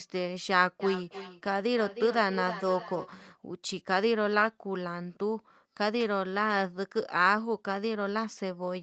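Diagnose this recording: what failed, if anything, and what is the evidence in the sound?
Feedback echo between two devices, 0.80 to 3.12 s: speech returns roughly every third of a second, thinner and ringing, peaking about 10 dB below the direct sound. A nearby device replays the call into this microphone, and the local echo canceller cannot remove sound it never played.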